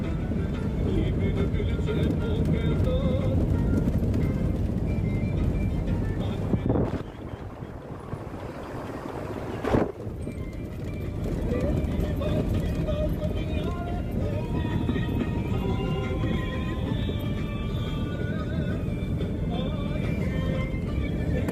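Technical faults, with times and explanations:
No technical faults can be heard anywhere in the recording, and the signal stays steady and intact throughout.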